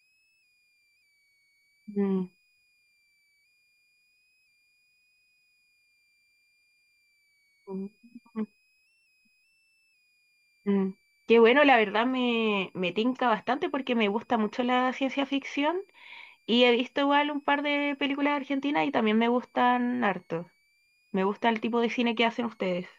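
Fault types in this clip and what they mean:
Switching supply whistle: throughout, a faint high tone wandering between about 2.1 and 2.7 kHz, roughly 45 dB below the speech, from a power supply switching at an audible rate.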